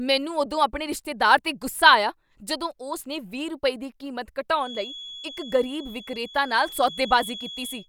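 From 4.54 s, just after "ਰੁਪਏ ਦੀ ਕੀਮਤ", a feedback whistle appears, likely caused by a loudspeaker-to-microphone loop sitting right at the edge of feedback, where one frequency recirculates without quite running away. A thin, steady tone at 3.4 kHz hangs behind the speech, roughly 15 dB below it, swelling and fading slowly in level, and it carries on to the end of the clip.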